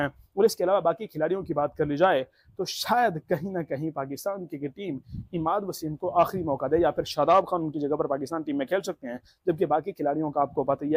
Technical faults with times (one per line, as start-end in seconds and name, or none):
none